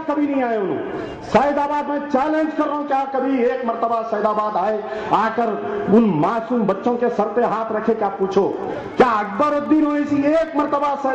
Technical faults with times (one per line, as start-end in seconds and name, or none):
8.20-11.14 Wi-Fi interference